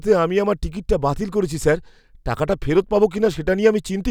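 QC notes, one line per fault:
No fault to note in this speech clip.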